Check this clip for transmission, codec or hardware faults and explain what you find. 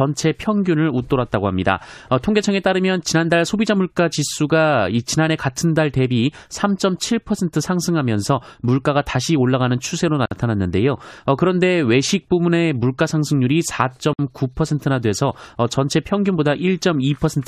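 Two faults stand out, both gaps at a join of encoded pieces. At 10.26 to 10.31 s (about 54 ms) and 14.13 to 14.19 s (about 57 ms), silence from untrimmed encoder delay and padding interrupts the speech, which resumes exactly where it stopped. Unlike a dropout, nothing is lost.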